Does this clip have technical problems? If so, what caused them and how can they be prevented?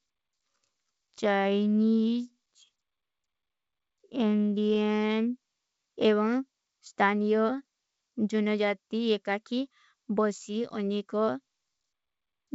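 Yes. A time-stretched section runs from 0.0 to 5.18 s. The speech plays at 0.58 times its normal pace with unchanged pitch, dragging before abruptly returning to normal speed. The likely cause is software lengthening the audio to fill a set duration by repeating short pieces of it. To prevent this, trim or re-record the material to fit rather than stretching it to a target length.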